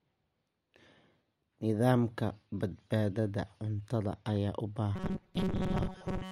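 Right after "ayaa u", at 4.96 s, the speech turns robotic until 6.31 s, a rigid metallic buzz at 188 Hz. That's robotic sound from repeated short buffers, likely a roughly 5 ms chunk replayed over and over while most real audio gets skipped.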